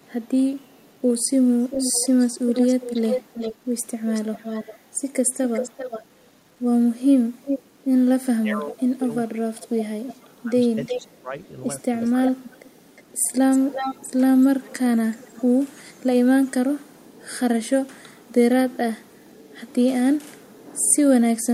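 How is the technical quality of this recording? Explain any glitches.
The quality is rough: a grainy texture runs through the whole clip, there's an audible echo for long stretches, and the talker gets ducked in the middle.

Low bit depth without dither: For the full length, quiet passages and word tails sound gritty, with the grain tracking the speech. That's likely the audio being rounded to about 9 bits with no dither, leaving distortion only around 40 dB below the speech.

Echo leak: A delayed copy of the speech comes back from 0.02 to 6.03 s and from 7.03 to 7.6 s, trailing by 392 ms, about 10 dB down and then about 5 dB down. It returns from 10.08 to 11.0 s and from 12.0 to 15.41 s at 360 ms, about 10 dB down. The far end's canceller likely didn't fully remove its loudspeaker pickup.

Speech suppressed in double talk: Between 8.3 and 12.39 s, the talker dips and drops out in pieces, roughly two seconds in all, at worst about 25 dB down. 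Both sides were likely talking, so the echo canceller turned everything down.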